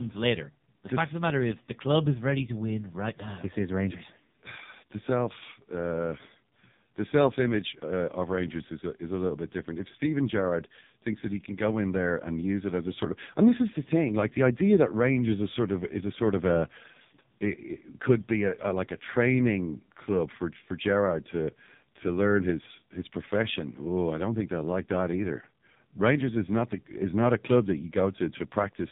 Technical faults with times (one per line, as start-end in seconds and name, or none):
0.00-28.92 AMR narrowband mobile codec